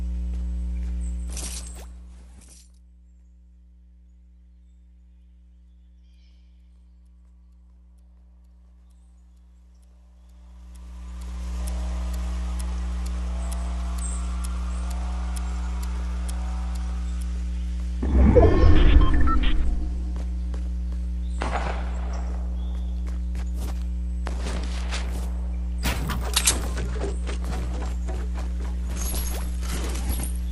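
Zipper noise runs from 1.07 to 2.65 s as the level drops by roughly 25 dB. The gain moves in 1 dB jumps, around fifteen a second, with no smoothing between them. Each jump puts a small click in the signal, so a ticking zip rides on the sound throughout the fade.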